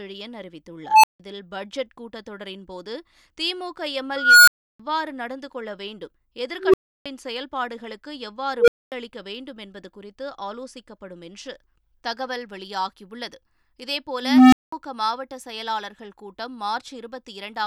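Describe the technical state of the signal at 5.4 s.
The speech signal at 5.4 s is intact, with no fault present at that moment.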